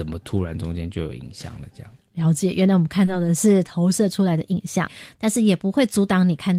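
A packet arrived late at 3.05 to 3.09 s and the jitter buffer ran empty, a short stall from a late packet. The receiver stretched the last sound by 20 ms and resumed without loss, so the speech briefly hangs with a slight buzz or dip.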